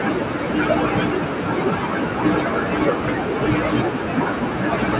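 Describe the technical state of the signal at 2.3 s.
At 2.3 s the noise suppressor artifacts are present, as they are across the whole clip. The suppressor estimates the room noise, sitting about 18 dB below the speech, and pulls down each band it judges noise-dominated frame by frame, so the noise sinks between the words and rises under them.

The same moment falls inside a span of speech cut by the noise suppressor, running from 0.00 to 4.99 s. Quiet speech energy is mistaken for noise and attenuated, by up to about 19 dB, so soft consonants and word endings sound swallowed or faint. The band-limited sound, with nothing above 4 kHz, reflects the G.711 call path.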